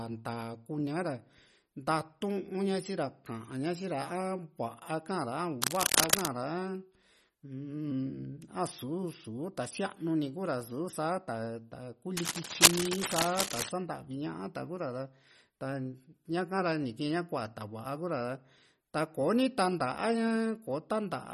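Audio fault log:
Throughout: MP3 compression. The speech has a plainly audible watery, swirling quality, likely from low-bitrate MP3 coding (a bitrate near 32 kbps fits the sound), where weak frequency lines drop in and out between frames and s sounds and consonant attacks turn metallic and smeared.
5.61 to 6.28 s and 12.17 to 13.69 s: cable scratch noise. Dense, irregular bursts of scratching rise over the speech, roughly 5 dB above it, likely from a worn cable or connector being moved so its contact resistance flickers rapidly.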